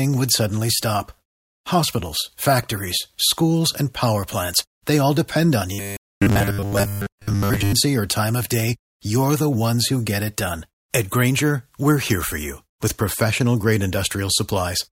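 Robotic sound from repeated short buffers, 5.73 to 7.73 s in this speech: a rigid 100 Hz buzz, which fits a 10 ms buffer likely replayed over most of the audio.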